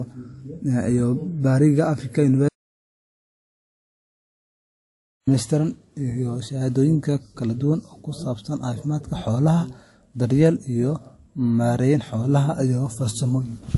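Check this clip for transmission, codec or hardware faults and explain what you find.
Two faults stand out in this speech recording: a layered codec texture across the whole clip, and one complete dropout near the start.

From start to finish there is transcoding between lossy codecs. The sound is swirly and metallic, with smeared consonants, and nothing sits above 11.3 kHz. The likely cause is a low-rate MP3-style encode followed by a WMA-style re-encode, each pass adding its own artefacts. On a spectrogram, a hard ceiling and blotchy high bands appear.

From 2.49 to 5.27 s there is an audio dropout to silence. The speech stops abruptly and about 2.8 s are lost before it resumes mid-flow. The likely cause is the input dropping while recording continued. The waveform goes flat, and the spectrogram shows a dark gap with no room tone.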